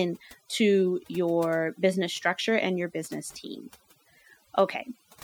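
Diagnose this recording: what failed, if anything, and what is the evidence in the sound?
Overdone noise removal in the call processing stage carves away frequency bands near the noise estimate throughout, leaving near-silent, twinkling gaps.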